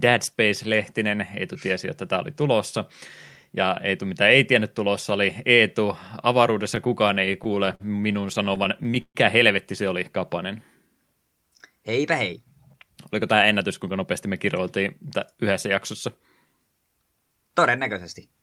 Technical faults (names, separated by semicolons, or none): repeated stalls (stutter); jitter buffer speed-up